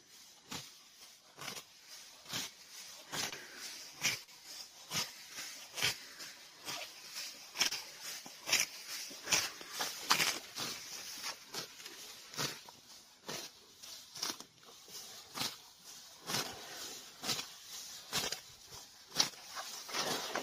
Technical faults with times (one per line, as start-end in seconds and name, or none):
3.29-3.34 short concealed packet loss
4.24-4.29 short concealed packet loss
7.67-7.73 short concealed packet loss